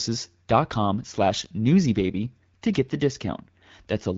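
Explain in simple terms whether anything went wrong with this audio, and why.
Nothing went wrong; the HD Voice coding works normally.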